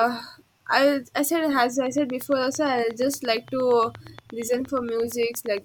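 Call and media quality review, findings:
Train of clicks, 1.86–5.58 s. Regular ticking at 8.63 clicks/s, roughly 30 in all, peaking at about signal level. Near-identical pulse shape, steady spacing, audible through speech pauses. Likely cause: interference from nearby equipment or a faulty connection or power supply injecting periodic pulses. Unlike random crackle or codec dropouts, spacing is metronomic and clicks sit on top of the sound rather than removing any of it.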